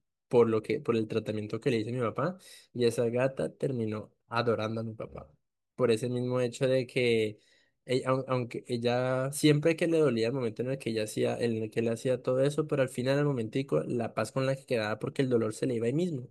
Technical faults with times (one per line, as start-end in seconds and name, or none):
none